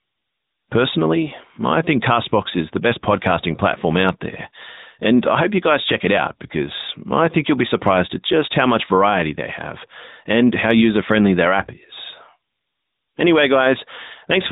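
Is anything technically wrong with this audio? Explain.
Yes, the whole clip has been through the AMR narrowband mobile codec, the standard 2G/3G phone speech codec. It runs at 8 kHz and models the voice as a vocal-tract filter excited by a handful of pulses per short subframe, so nothing above about 3.8 kHz survives. The speech sounds muffled and phone-like, with a plainly audible buzzy, synthetic edge that fits a mid-rate mode around 10 kbps.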